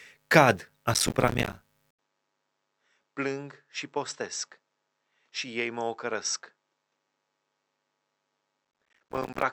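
From 0.94 to 1.57 s, processor overload crackle: the processor misses dozens of deadlines for short buffers of around 5 ms. Each miss leaves a silent hole, and together they tear the speech into gritty crackle. At 1.91 s the input was likely switched to a poorer device. After an 80 ms silence, the speech is roughly 10 dB quieter and duller, with nothing above 7.9 kHz and a faint new noise floor. The crackle returns from 8.65 to 9.42 s, denser and longer.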